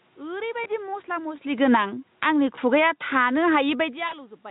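Speech carried over a VoIP link shows three kinds of fault. VoIP packet loss concealed by the speech codec occurs at 0.63–0.69 s and 2.55–2.60 s, each the loss of a single 20 ms frame, and at 4.07–4.14 s, where two frames (40 ms) go missing. In each gap the decoder keeps repeating its last pitch period and spectral envelope at falling gain, so the sound smears into a brief buzzy tone or coloured noise that fades. Because each reconstructed frame seeds the next, the voice stays weak or distorted for a short time after real packets resume.

Automatic gain falling runs from 1.47 s to 4.4 s, a slow reduction of about 7 dB. The gain control judged the input too loud or its background too strong and eased its gain down, so the speech and the room noise behind it sink together across most of the clip rather than the voice alone getting quieter.

Automatic gain rising appears twice on top of that, each about 4 dB: at 1.81–2.72 s and at 3.37–3.94 s. 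The second responds to a drop of about 22 dB at the microphone around the time the talker moves, near 3.5 s. In both cases voice and background swell together over most of a second as the control chases the quieter input.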